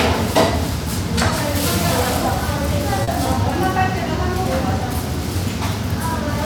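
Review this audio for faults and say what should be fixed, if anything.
At 3.03 to 3.10 s there is a short concealed packet loss: about 40 ms of audio never arrived in time, and the receiver bridged the gap by extending the preceding sound before crossfading back, heard as a brief smear. On a spectrogram the patch shows smoothed, repeated-looking harmonics or blurred noise with softened onsets. A larger jitter buffer or forward error correction on the link would prevent this.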